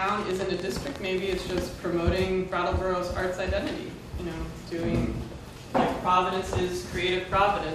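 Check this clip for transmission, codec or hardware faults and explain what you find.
There's one fault here, a train of clicks. From 0.09 to 1.51 s, roughly fifteen unevenly spaced pops arrive at about 9.2 per second. They peak around 10 dB above the sound, most likely from interference or a faulty connection.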